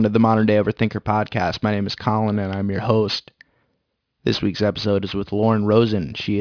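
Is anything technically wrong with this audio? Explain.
Yes, there's aliasing running through the whole speech clip. It sounds like the audio was taken down to around 11 kHz without an anti-alias filter, so anything above about 5.5 kHz folded back as wrong pitches. Sibilants come out gritty and metallic, with the junk sitting maybe 20 dB under the voice.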